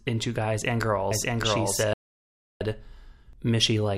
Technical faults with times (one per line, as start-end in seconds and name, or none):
1.11-3.33 doubled audio track
1.93-2.61 digital broadcast dropout